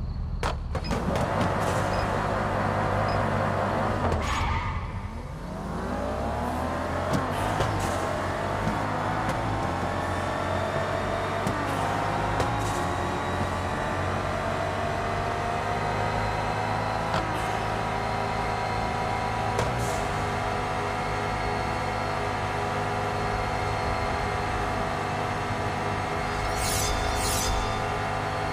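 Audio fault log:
No fault to log.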